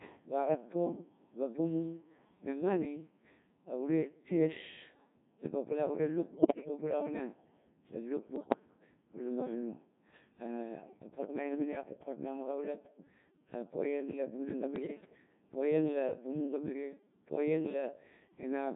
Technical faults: Codec 2 vocoder; bit errors on digital voice radio

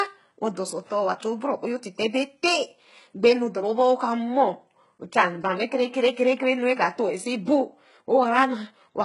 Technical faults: HE-AAC compression

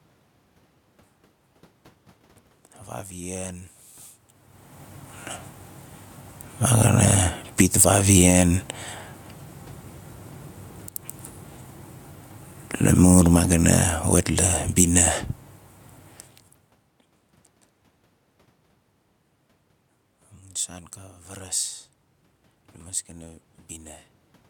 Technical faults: automatic gain falling; automatic gain rising

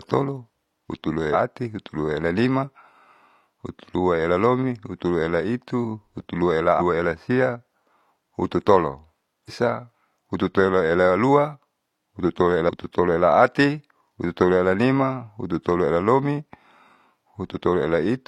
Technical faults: damaged data in a compressed stream

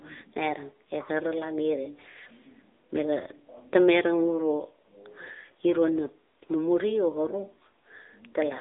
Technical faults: AMR narrowband mobile codec

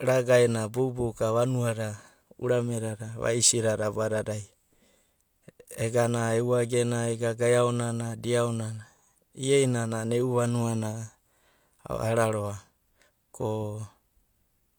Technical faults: low-bitrate audio saved at a high bitrate

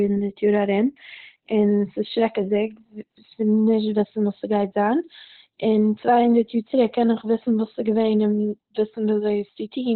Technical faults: Opus compression

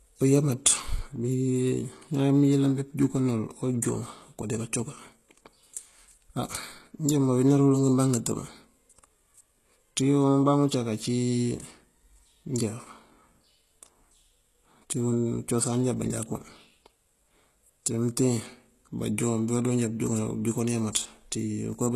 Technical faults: HE-AAC compression

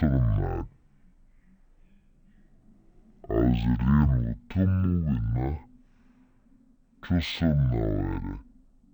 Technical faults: stereo read as mono

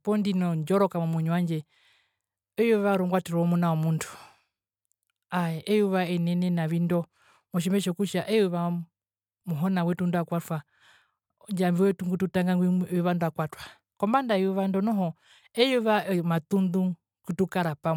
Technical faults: none

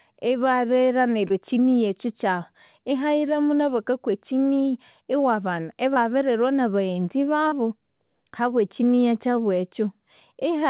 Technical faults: short concealed packet loss

